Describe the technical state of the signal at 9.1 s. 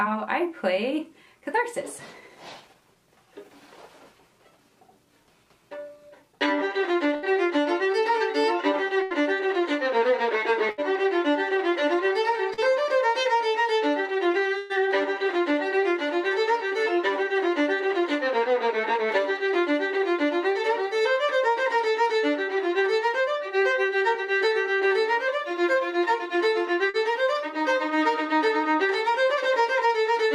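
The sound is stretched into a fading held tail from 9.03 to 9.13 s, then jumps ahead: a burst of packet loss, with about 80 ms concealed and skipped.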